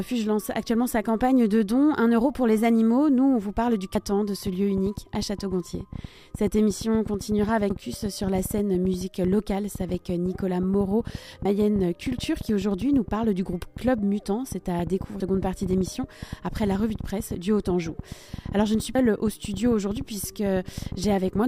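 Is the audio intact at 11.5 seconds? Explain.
No. At 11.45 s the sound jumps forward abruptly: about 300 ms is missing, and the material on either side is butted together with no silence, so the skip is heard as a sudden splice rather than a pause. This is audio missing between chunks. The likely cause is a recorder or processor working in blocks that drops a short stretch while closing one block and opening the next. The timing fits 4-second chunks.

The same moment also sits inside a train of clicks running from 4.47 s to 21.39 s. It is a persistent ticking and popping laid over the sound, including the gaps, at about 9 clicks per second on an uneven pace, with roughly 150 pulses of similar shape peaking around 5 dB above the signal. The likely source is interference from nearby equipment or a faulty connection or power supply injecting repeated impulses into the signal path.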